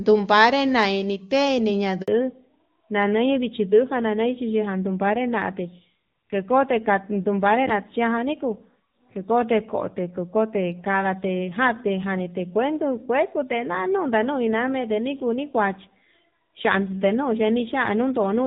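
At 2.02 s the call is handed from one network to another, and for about 60 ms, until 2.08 s, no speech frames reach the receiver. This handover gap sounds like a sudden hole: the voice fades out almost immediately and the line goes silent before the new link picks up. Whatever was said during that short window is lost.

From 2.08 s to the end, the call falls back to narrowband. Before the switch, the AMR wideband (HD Voice) codec carries the voice with clear upper frequencies and little or no audible coding damage. After it, the link drops to an older narrowband codec, and nothing above 4 kHz survives. The voice becomes noticeably duller and more muffled, with a rougher, grittier texture that suggests a low-rate narrowband mode, likely around 7.4 kbit/s.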